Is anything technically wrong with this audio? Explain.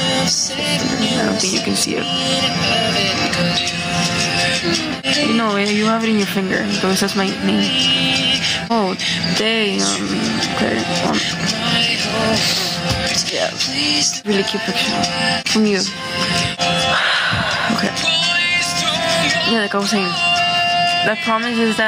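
Yes. Gain pumping runs through the whole clip. The level is pulled down as soon as a loud sound arrives, a level swing of around 15 dB. The likely cause is input gain set far too high for the microphone, with a fast limiter or compressor clamping down on each peak and releasing in the gaps. Loud and quiet passages end up close in level, so the audio sounds squashed.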